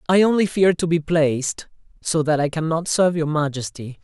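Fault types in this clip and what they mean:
Nothing in this speech clip stands out as a fault; it just comes across as an ordinary recording with no dropouts, clicks or glitches to point to.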